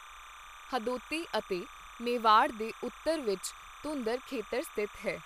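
Speech recording with timecode bleed running for its full length: a steady chirping warble sits behind the voice, roughly 20 dB below it. Linear timecode from an adjacent track or cable has leaked into the audio path. The code is a square wave flipping between two pitches around 1 kHz and 2 kHz as it encodes each bit, and its 29.97 frames-per-second rate gives the warble its fast, regular texture.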